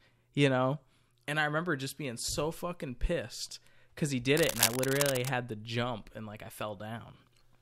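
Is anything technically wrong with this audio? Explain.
Yes. From 4.37 to 5.29 s, between "pissed cuz he did" and "to jump and like", a harsh, uneven scratching rustle sits roughly as loud as the speech: cable scratch noise, likely from a worn cable or connector shifting its contact.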